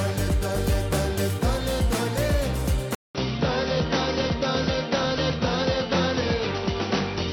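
At 2.95 s the sound drops out for about 200 ms, then returns duller and boxier, with nothing above 5.9 kHz and new background noise roughly 30 dB down, lasting to the end. This is likely an input switched to a poorer device. The gap and changed noise bed set it apart from a simple filter change.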